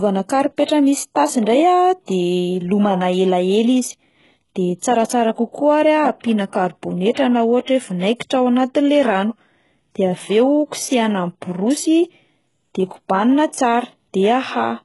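From start to finish, the speech has most likely been through HE-AAC compression, with the heavy damage pointing to a very low bitrate of around 12 kbps. The encoder kept only the lower spectrum and synthesised the treble by copying lower bands upward, so those upper harmonics no longer match the real ones. Nothing remains above 11.5 kHz, and the reconstructed top end gives s sounds a gritty, metallic, lispy edge.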